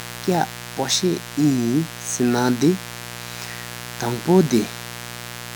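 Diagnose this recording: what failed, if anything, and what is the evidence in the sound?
The analogue wiring stage picked up mains buzz at 60 Hz, running through the whole speech clip at about 15 dB below the speech. A dimmer, rectifier or poorly shielded cable is injecting sharp switching spikes twice per mains cycle. On the spectrogram this appears as a ladder of horizontal lines at 60 Hz and its multiples, reaching up to several kHz. The waveform shows small spiky pulses repeating 120 times per second, and the result is a steady, raspy buzz under the speech.

The codec stage shows generation loss. The speech sounds swirly, hollow and smeared throughout, and consonant attacks are blurred beyond what a single 128 kbit/s MP3 pass would produce. This fits the likely cause of around four successive MP3 decode and re-encode cycles, each quantising on a shifted frame grid so that the errors accumulate. 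On a spectrogram, energy stops sharply near 20.1 kHz, fitting an MP3 encoder's lowpass. Below that cutoff, patchy holes and flickering time-frequency blocks appear, and onsets are smeared.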